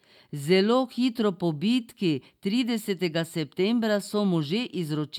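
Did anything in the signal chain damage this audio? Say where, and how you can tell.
No, nothing in the chain damaged this speech.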